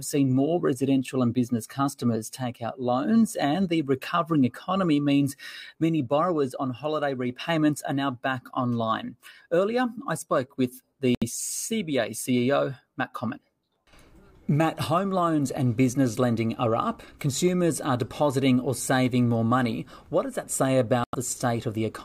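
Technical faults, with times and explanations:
11.15 to 11.23 s and 21.04 to 21.15 s, Bluetooth dropout: the audio cuts to silence for about 80 ms and then about 105 ms, and when it returns it has skipped ahead rather than picking up where it stopped. That pattern points to a few packets likely arriving too late over the wireless link and being thrown away, so the headphones had nothing to play until the next good packet arrived.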